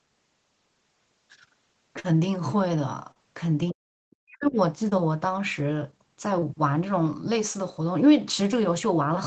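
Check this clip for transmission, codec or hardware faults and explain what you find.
The clip has three kinds of transmission fault: one burst of packet loss, three short concealed packet losses and a stretch of suppressed speech. The band stops near 8 kHz, which fits a low-rate Opus call path.

Burst of packet loss, 1.99 to 2.11 s: several packets arrived too late or never arrived. The receiver stretched the last sound for about 48 ms while fading it, so a held buzz or hiss stands in. Then about 40 ms of speech is skipped outright.

Short concealed packet loss at 3.12 to 3.17 s, 4.89 to 4.93 s and 6.39 to 6.44 s: each time, a few hundredths of a second failed to reach the decoder. The receiver patched the hole by extending the preceding sound, about 37 ms in the first case and 20 to 23 ms in the others, then crossfaded back. Each heals as a brief smear or wobble.

Speech suppressed in double talk, 3.71 to 4.58 s: the speech sinks sharply, at its deepest by roughly 40 dB, with the damage spread over about a second. 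The likely cause is an echo canceller that met simultaneous talk and turned down the near side along with the echo.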